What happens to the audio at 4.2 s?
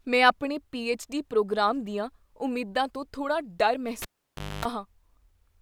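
At 4.2 s the speech is interrupted by a cable being pulled and plugged in again. The live connection is broken at 4.02 s, giving a pop and then about 0.58 s of near silence. As the plug goes back in, only its tip makes contact at first, so a 0.26 s burst of 50 Hz mains buzz leaks through. A second pop follows as full contact restores the signal at 4.65 s.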